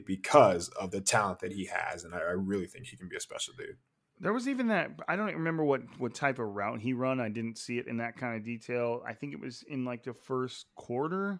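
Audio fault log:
No technical fault can be heard anywhere in this speech recording.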